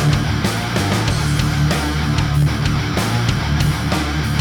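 At 2.42 s a tiny block of samples, lasting about 0.73 ms, dropped to digital silence; the abrupt cut and return is heard as a tick or dip.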